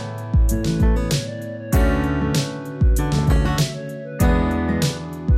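Throughout, the sound is dull and grainy with a gurgling edge, likely MP2 compression at a low bitrate near 80 kbps, starving the upper sub-bands of bits. From 3.14 to 3.48 s, short blips of noise appear, DAB burbling from reception bit errors corrupting MP2 frames and putting noise into single sub-bands.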